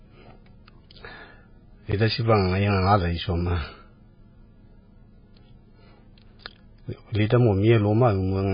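Throughout the speech, the audio carries heavy damage that is likely from MP3 compression at a very low bitrate, around 14 kbps. Nothing remains above 5 kHz, so the sound is dull and boxed-in, and sibilants turn into watery, swirly chirps as weak frequency lines flicker on and off between frames. On a spectrogram this shows as a hard flat ceiling at 5 kHz, with patchy, blocky energy beneath it.

At 1.92 s and again at 6.95 s, a block of digital silence of about 12 ms cuts the sound dead. A length that fits a 512-sample buffer points to the output buffer not being filled in time. Each edge of the block is abrupt, with no fade, and at this length each block comes across as a tick or dip rather than silence. The waveform drops to a near-flat line at each point. The spectrogram shows a thin vertical gap.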